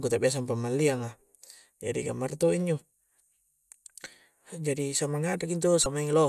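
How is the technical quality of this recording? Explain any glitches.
There is one glitch in the speech: from 5.83 to 5.86 s a short glitch cuts through. It comes from damaged data in the compressed stream. Corrupted frames there make the decoder misread them, lose sync and jump to the next valid frame header.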